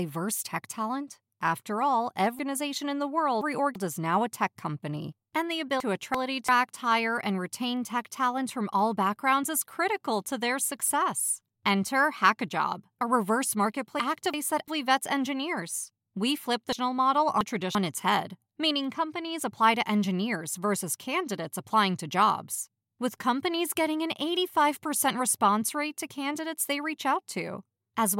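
Chunks out of order jumble this speech four times: 2.39–3.76 s, 5.80–6.49 s, 14.00–14.68 s and 16.73–17.75 s. A 341 ms block plays one to three blocks late, so nothing's missing but the sequence scrambles across three hard joins.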